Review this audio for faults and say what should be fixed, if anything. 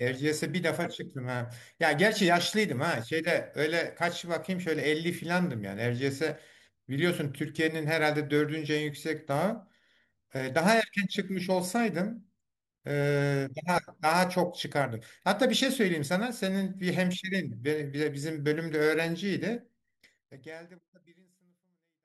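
Nothing to fix; the speech ends in an even fade-out from about 20 s to the end, with no click or hard edge.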